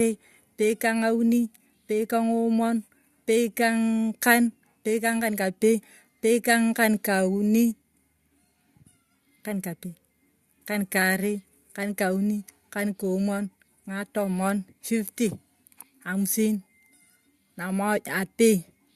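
No technical faults are audible.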